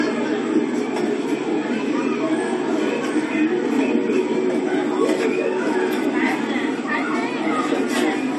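Throughout the recording of everyday sound, nothing is present above 13.7 kHz, and the artefacts of the earlier encode remain. This is likely low-bitrate audio saved at a high bitrate: an earlier encode, consistent with a roughly 48 kbit/s AAC stage, removed that detail, and a later 320 kbit/s MP3 encode preserved the loss. A genuine 320 kbit/s MP3 would reach much higher; this cut-off comes from the first encode.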